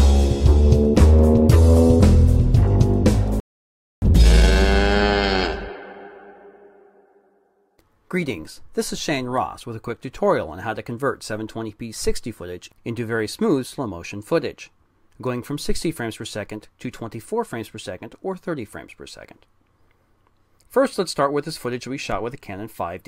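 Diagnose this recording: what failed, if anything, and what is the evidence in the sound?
Playback went wrong here, starting with a playback stall. At 3.4 s the sound just drops out mid-flow and stays silent until 4.02 s, roughly 620 ms of nothing. Then it resumes. The likely cause is the player's buffer running dry or its output thread getting blocked, so the device had nothing to render until data started flowing again.

Right after that comes time-compressed catch-up, from 4.02 to 5.26 s. The audio sounds rushed, running about 1.5 times normal speed, but the pitch stays where it should be. That's the player clawing back the backlog the stall built up. It snips out small slices and cross-fades the joins, which shortens the audio without the chipmunk effect.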